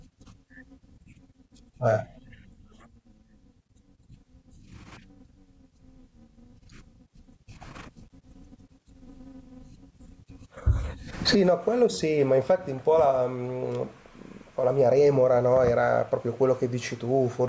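Gain pumping runs through the whole recording. The gain is pulled down under each loud syllable, swinging by around 20 dB. The likely cause is input gain set far too high, with a fast limiter clamping every peak. The waveform looks flattened, and the spectrogram tops out at 8 kHz from the call processing.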